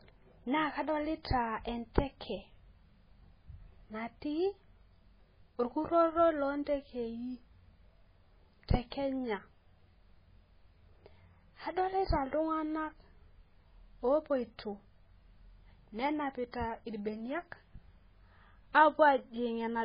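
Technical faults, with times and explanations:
Throughout, MP3 compression: nothing above 5 kHz; weak frequency lines flicker frame to frame, sounding watery, likely an MP3 encoder starved of bits, fitting 16 kbps.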